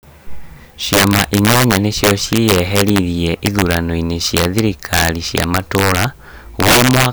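Throughout the speech, integer overflow: the signal is driven about 10 dB past full scale and wraps to the opposite sign, so loud peaks burst into violent cracks.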